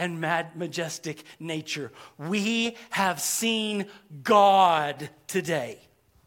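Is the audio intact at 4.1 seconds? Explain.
Yes, at 4.1 seconds the speech runs through intact, with no dropout, click, distortion or other fault at that moment.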